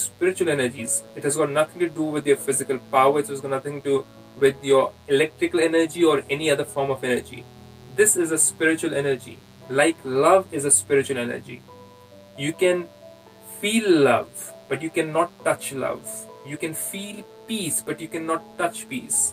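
From start to finish, a mains buzz sits under the sound: a steady, raspy drone well below the main signal, roughly 30 dB down. Sharp switching spikes from something like a dimmer or rectifier, or from an unshielded line, leak in twice per 60 Hz cycle, so the buzz repeats 120 times a second. On a spectrogram it appears as evenly spaced horizontal lines at multiples of 60 Hz climbing into several kHz. On a zoomed waveform it appears as regular small spikes.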